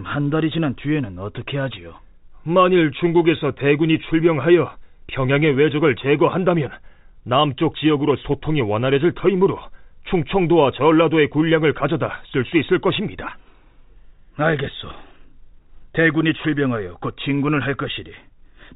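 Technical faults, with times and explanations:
No technical faults can be heard in this speech recording. It carries the narrow telephone band of G.711 coding, with nothing above 4 kHz and only a faint hiss that rises and falls with the level.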